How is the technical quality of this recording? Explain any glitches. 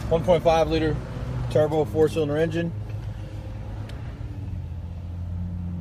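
One glitch stands out. Frames out of order from 3.95 to 4.15 s: two adjacent blocks of about 93 ms were swapped, giving a garbled flutter and no lost time.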